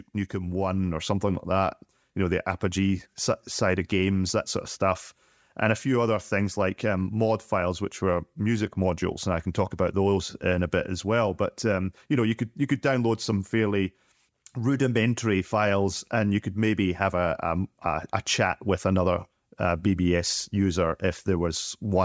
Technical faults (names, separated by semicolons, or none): automatic gain rising